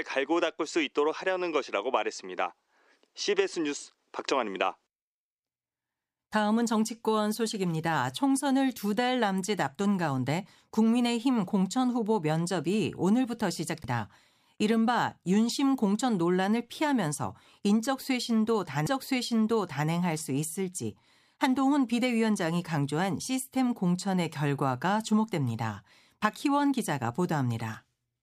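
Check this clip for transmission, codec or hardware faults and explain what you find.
Two CD skips show up in the speech, at 13.83 s and 18.86 s. In each case the laser has jumped to a different turn of the disc's spiral, likely knocked off track by a bump or a flaw in the disc. The player briefly mutes, about 10 ms at the first and only a few milliseconds at the second, then resumes from the new spot. You hear a little tick and the speech abruptly picks up from a different point.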